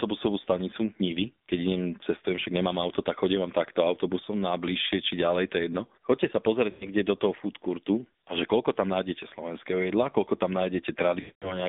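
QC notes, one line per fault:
Throughout: AMR narrowband mobile codec. The speech is held to a 200 Hz to 3.6 kHz band, so it sounds thin and boxed in, with nothing above 4 kHz. Codec damage is plainly audible: a buzzy, synthetic edge on the voice. This comes from the codec rebuilding speech from a vocal tract model driven by a few pulses per short subframe. The coarse result fits a low mode near 7.4 kbps.
6.70–6.89 s and 11.20–11.63 s: lost AMR speech frames. In the first run, about 100 ms of speech is missing just before "do toho food courtu". The sound drags on, then dips away. The second run is longer, about 220 ms, near the end. There the sound stretches and fades to silence. Frames that failed their checks were replaced by reusing the last good pitch and vocal tract settings at falling gain. The gaps fit runs of five and eleven 20 ms frames.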